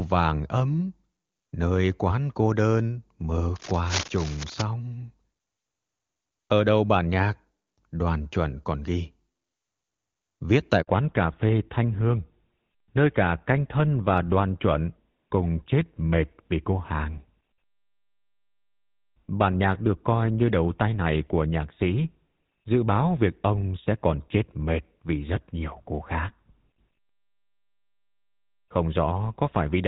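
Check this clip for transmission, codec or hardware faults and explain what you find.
Three faults stand out in this speech recording: a burst of scratchy noise early on, then a brief dropout, and right after it the call loses its high end for good.

Cable scratch noise, 3.56 to 4.62 s: For about a second there's a dense, uneven scratching and rustling laid over the speech, sitting roughly 10 dB below it. It's likely a worn cable, connector or control being moved, so the contact resistance jumps around rapidly and injects ragged noise bursts into the signal until things settle.

Handover gap, 10.82 to 10.88 s: The audio fades out over a few tens of milliseconds and goes silent for about 60 ms. That's the call being passed from one network to another, with no speech frames getting through during the switch. Whatever was said in that window is simply gone, and the audio resumes once the new link comes up.

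Fallback to narrowband, 10.88 s to the end: From the moment the audio returns, nothing above 4 kHz is left, so the voice sounds duller and rougher than before. Up to the gap it had the fuller HD Voice quality of wideband AMR-WB, consistent with one of its higher rates. The switch points to the call settling onto an older narrowband codec, which fits GSM full rate, after the handover.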